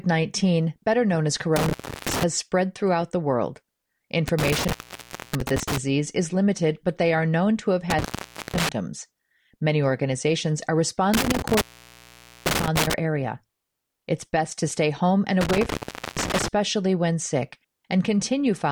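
Intermittent contact breaks the speech five times: 1.56–2.23 s, 4.28–5.78 s (just before "is limited but they"), 7.90–8.69 s (after "are known to have"), 11.14–12.94 s (after "organizations are") and 15.41–16.48 s. A loose connection opens for 0.34 to 0.85 s, leaving faint hiss framed by crackle, not the clean, silent edges of a digital dropout.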